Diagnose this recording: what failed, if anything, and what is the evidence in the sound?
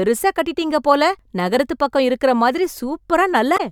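A short disruption cuts into the speech from 3.54 to 3.61 s, about 65 ms, just before the recording ends. The fault is damaged data in a compressed stream, at the codec or storage stage. A stretch of the encoded bitstream has been corrupted, so the decoder misreads or refuses those frames and loses sync. It does not recover until it locks onto the next valid frame header, which leaves a brief non-speech blip in place of the intended audio.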